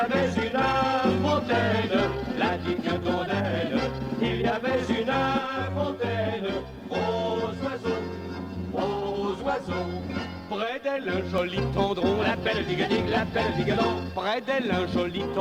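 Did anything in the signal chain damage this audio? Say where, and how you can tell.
Yes. From 5.38 s to 11.38 s the sound turns hollow and phasey, with a fixed, slightly metallic colouring that stays put while the material changes, then clears abruptly. That is channel delay (comb filtering), at the driver or buffer stage before a mono sum. One channel arrives roughly 10 ms late, so shared content cancels at evenly spaced frequencies starting near 50 Hz and repeating about every 100 Hz up the spectrum.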